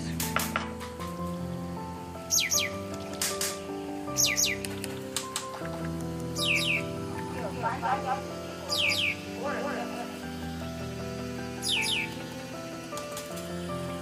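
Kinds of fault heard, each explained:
Doubled audio track: the whole sound plays twice, a second full-band copy about as loud trailing roughly a fifth of a second behind, likely from a duplicated capture path.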